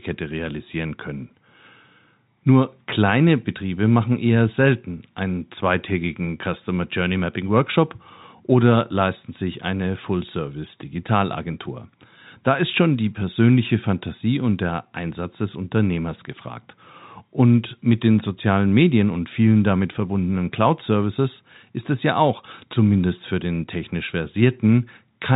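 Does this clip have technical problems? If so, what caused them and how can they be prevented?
No, the speech carries no technical faults; it comes through G.711 telephone coding, so nothing above about 3.8 kHz is present and a faint level-following hiss sits under it, as expected of ordinary 64 kbps telephone audio.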